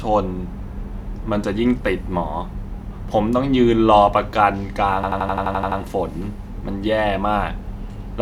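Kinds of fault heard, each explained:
System hang loop: the machine or its driver stalled while the sound hardware kept replaying the same ring buffer. From 5.04 to 5.80 s, one 85 ms slice of the speech repeats exactly, nine times over. At roughly 11.7 repeats a second, it comes across as a rapid machine-gun stutter rather than a buzz, and the loop length fits a 4096-sample buffer going round while nothing fresh was being written into it.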